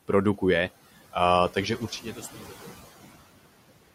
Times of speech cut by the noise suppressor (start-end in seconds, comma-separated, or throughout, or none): 2.34-2.54